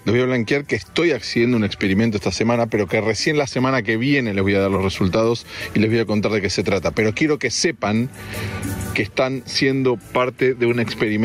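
Gain pumping runs through the whole clip. The swing is large, somewhere around 25 dB. Loud and quiet passages sit much closer in level than they should, so the audio sounds squashed. The likely cause is input gain set far too high for the microphone, with a fast limiter or compressor clamping down on every peak.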